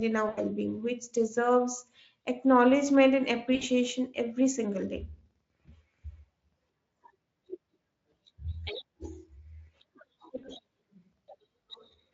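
At 0.29–0.39 s (before "being which deserves acknowledgement"), 3.55–3.64 s (after "which deserves acknowledgement and"), 5.65–5.75 s (after "every single day") and 10.37–10.54 s, VoIP packet loss concealed by the speech codec appears. Gaps of about 80, 60, 20 and 60 ms are filled by extrapolating the last pitch and filter, giving a buzzy or noisy, fading smear. On a spectrogram this shows as repeated, blurred harmonics that dim. The waveform decays in amplitude.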